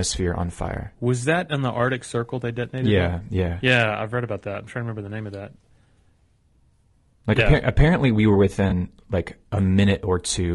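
All the way through, the speech has a rough, grainy edge, with noise creeping in between the harmonics and a thin, synthetic top end. That's likely low-delay AAC compression: short frames blur the pitch structure, and the damage fits a bitrate around 32 kbps.

Then from 8.69 to 8.72 s, right after "apparently we were", there's a brief smeared, noisy patch. That's AAC frame loss with concealment: the decoder papered over roughly 20 ms of missing audio, which points to a single lost frame.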